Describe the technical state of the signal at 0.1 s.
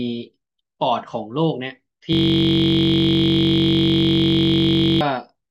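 The audio at 0.1 s is intact, with no fault present at that point.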